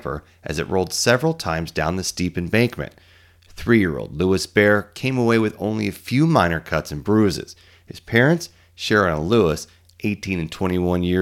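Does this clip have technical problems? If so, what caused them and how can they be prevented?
No, the speech signal shows no technical faults anywhere in the recording, so there is nothing to trace back to a cause or prevent.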